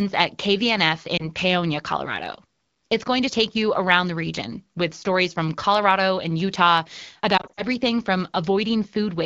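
A brief dip at 1.17 to 1.24 s, then a broken, warbling stretch at 7.38 to 7.63 s: lost AMR speech frames, where the decoder concealed the missing frames of this wideband call by repeating the last good values with falling gain. The first fits one lost frame, the second scattered losses with a longest run of 40 ms.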